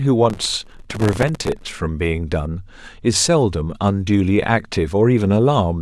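From 0.30 to 1.67 s the processor repeatedly misses its audio deadlines, around a hundred buffers of roughly 1.5 ms each. Every miss replays a hard-edged scrap of old audio, so this processor overload crackle lays gritty tearing over the speech until it clears.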